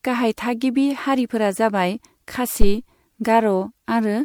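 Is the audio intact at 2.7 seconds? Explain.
No. From 2.61 to 2.76 s a deep phantom power thump cuts through the speech, a low thud that dies away within about 34 ms. A supply switching on a live input sent a sudden voltage step through the coupling capacitors.

Across this moment the speech also sounds swirly, hollow and smeared, with softened attacks. This is likely generation loss: the sound points to around seven rounds of MP3 encoding, each at about 96 kbit/s, with every pass adding fresh quantisation noise and spectral holes.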